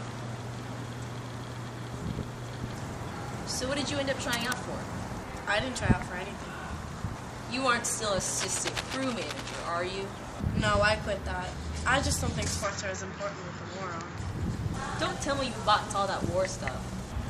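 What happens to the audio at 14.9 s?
Nothing goes wrong at 14.9 s; the audio carries on intact through that moment.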